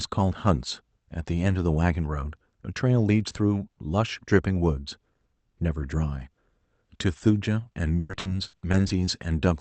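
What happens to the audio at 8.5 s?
Packets on the call path are being lost or arriving late again and again, and 8.5 s falls inside that run of repeated packet loss (robotic sound), from 7.99 s to 9.09 s. There are seven holes, the longest 100 ms, and each is covered by stretching the last bit of sound, so roughly a quarter of the stretch is patched. The speech turns choppy, with pieces missing, on top of the Opus call audio, which is limited to about 8 kHz.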